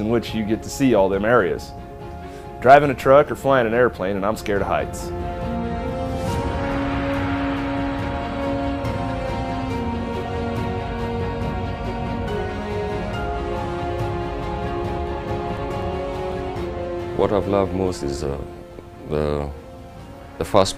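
From 15.07 to 16.82 s, eight regular ticks, each a tiny dropout, the longest around 4 ms, recur about four times a second. These are CD scratch ticks: a blemish wipes out more data than error correction can rebuild on each disc revolution, so the player interpolates or mutes those samples.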